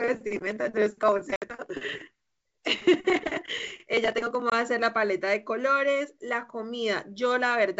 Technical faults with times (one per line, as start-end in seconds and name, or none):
1.36-1.48 packet loss on an ADPCM call
4.50-4.53 packet loss on an ADPCM call